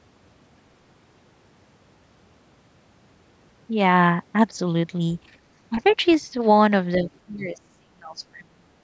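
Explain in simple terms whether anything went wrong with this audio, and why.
Other side's voice leaking through, from 5.76 to 6.13 s: a faint second voice sits quietly under the speech. The talker's device was likely playing the far end on a loudspeaker, and its echo canceller failed to strip that sound from the microphone.

Speech suppressed in double talk, at 6.97 to 7.09 s, 7.26 to 7.58 s and 7.79 to 8.8 s: the talker's voice drops in level, briefly at first and then deeply for the final second. With both sides likely speaking at once, the echo canceller turned everything down.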